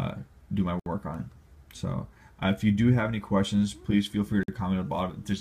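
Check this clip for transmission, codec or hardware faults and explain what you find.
Two gaps at a join of encoded pieces. One falls at 0.80 to 0.86 s, about 66 ms. The other is at 4.43 to 4.48 s, about 50 ms. Separately encoded pieces were joined untrimmed, keeping encoder delay and end padding. The sound drops to silence with softened edges, then resumes where it stopped.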